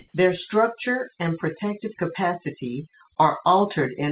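A speech clip heard through a narrowband call path with nothing above 4 kHz. Overdone noise removal runs throughout: the spectrogram shows isolated flickering specks in a near-empty background. From 0.0 to 0.14 s the background is a flat, featureless hiss about 11 dB different in level from the later background and about 46 dB under the loudest speech. That is likely comfort noise in place of the background, appearing as a smooth, uniform band on the spectrogram.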